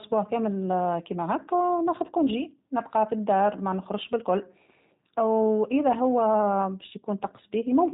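Throughout the speech, the sound carries plainly audible G.729 codec damage. Nothing above 4 kHz survives, so the speech sounds narrow and muffled. It is rebuilt from a vocal tract model and sparse pulses, which makes it rough and synthetic, consistent with 8 kbit/s VoIP coding.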